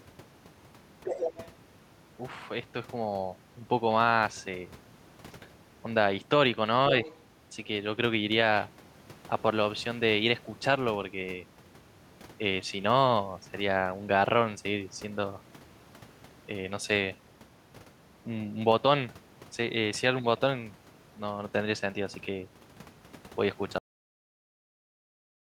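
Other side's voice leaking through appears in this speech clip from 1.04 to 1.46 s, only a little below the main talker, and again from 7.03 to 7.2 s, much fainter. A second voice is audible, likely far-end audio from the loudspeaker that the echo canceller left in the microphone signal. A cut-off end follows at 23.78 s. The audio stops abruptly mid-sound and drops straight to digital silence with no natural decay, because the final buffers were never written or played out.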